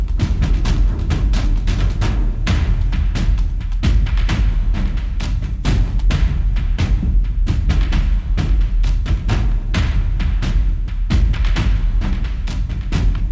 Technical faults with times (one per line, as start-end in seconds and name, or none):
none